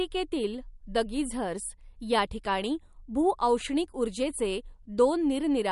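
From start to finish the speech carries plainly audible coding damage, most likely MP3 compression at a low bitrate, with a damage level that points to something around 48 kbps. Nothing remains above 11.2 kHz, so the top of the spectrum is missing. With too few bits, weak frequency components are dropped and return from one frame to the next, which gives the speech a watery, swirling texture and smears its sharper onsets.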